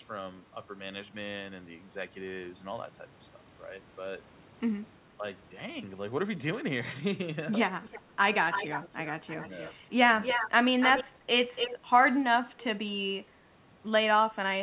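Speech heard through a narrowband call path, with nothing above 4 kHz, as you'd expect from a telephone codec such as G.711. It has an echo leak in six bursts: 7.81–8.02, 8.51–9.08, 9.27–9.72, 10.21–10.5, 10.8–11.04 and 11.55–11.75 s. A distinct delayed copy of the speech trails the original, at 330 ms in the first two bursts and 287 ms in the rest. It starts faint, roughly 20 dB down, and grows almost as loud as the speech. The likely cause is a far-end loudspeaker whose echo canceller let its own microphone pick-up through. Unlike room reverberation, it is a separate repeat rather than a smooth decay.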